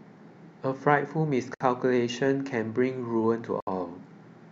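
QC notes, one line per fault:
1.54–1.60 s and 3.60–3.67 s, gap at a join of encoded pieces: speech drops into silence for about 62 ms, then about 67 ms, two seconds apart, and resumes exactly where it left off. The speech appears to have been encoded in two-second pieces and butted together untrimmed, so each join carries the previous piece's padded final frame plus the next piece's start-up delay. The hard edges are smeared by the codec.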